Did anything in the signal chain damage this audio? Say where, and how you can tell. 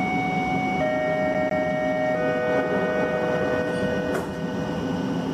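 Yes. The damage happens at the playback stage, in the disc transport. From 1.34 s to 1.65 s the sound sticks. A slice of about 154 ms plays twice in a row, with a short mute at each jump back. The repeats are evenly spaced, which gives the quick, regular stutter of a CD stuck on one turn. A scratch makes the laser lose tracking. It jumps back one track at the same point on each revolution, so the same fragment returns until it breaks free.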